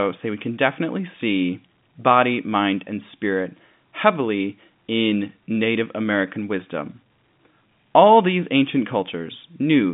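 Nothing goes wrong anywhere in the clip; the speech sits in ordinary G.711 telephone coding, so the narrow 150 Hz to 3.6 kHz line band with nothing above about 3.7 kHz is simply how the phone path sounds.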